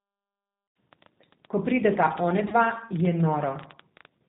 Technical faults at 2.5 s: G.729 codec; train of clicks; VoIP packet loss concealed by the speech codec

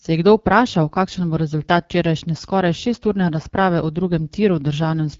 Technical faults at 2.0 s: AMR wideband (HD Voice) codec

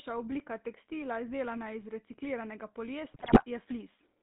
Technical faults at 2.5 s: GSM full-rate codec

